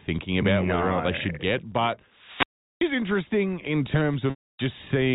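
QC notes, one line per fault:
2.09–3.04 s and 4.19–4.75 s, wireless microphone squelch dropout: the radio link fades, hiss swells, then the receiver's squelch shuts the output for about 385 ms and then about 232 ms before the speech comes back.
4.30–4.36 s, packet loss with pitch repetition: right inside that second dropout, roughly 80 ms of audio goes missing, which fits four 20 ms packets. The receiver loops the last pitch cycle to cover it, so there's a short held buzz fading out before the audio resumes.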